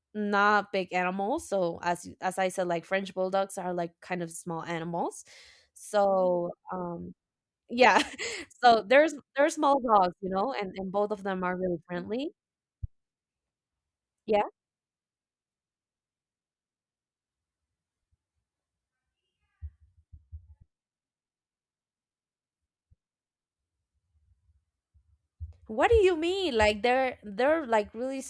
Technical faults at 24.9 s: none

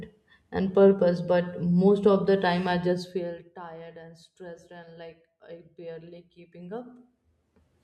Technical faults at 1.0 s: none

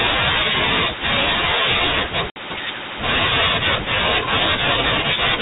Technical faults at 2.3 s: packet loss on an ADPCM call

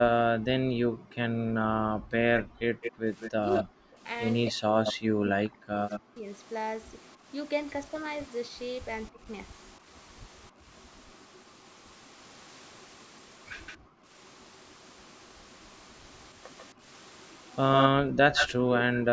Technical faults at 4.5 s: speech suppressed in double talk; echo leak

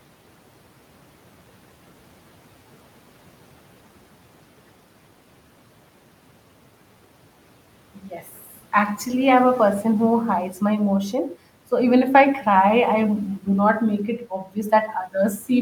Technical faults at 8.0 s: speech cut by the noise suppressor

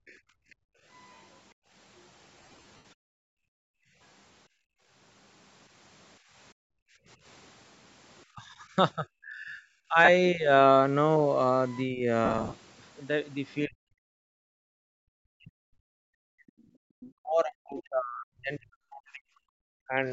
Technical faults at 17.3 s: speech suppressed in double talk; other side's voice leaking through

